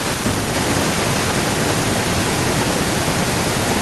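From 0.54 s to the end, a second copy of the speech trails the original by about 1.09 s. It's an echo leak, and it sits only a little below the live talker, roughly 5 dB down, so it's hard to ignore. The likely cause is a far end on speakerphone whose echo canceller didn't fully scrub what its mic caught, so part of our own audio got sent straight back. Over that stretch the two layers of speech overlap and smear together.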